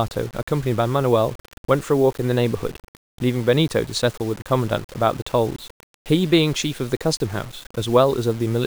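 Low bit depth without dither runs through the whole speech clip, from start to end. The grainy distortion tracks the voice, rising and falling with it, and the error sits roughly 25 dB below the signal. That points to samples likely rounded to only about 6 bits with no dither, so the error stays tied to the waveform. Quiet passages turn rough and gritty, and the faintest decays sputter or drop out to silence.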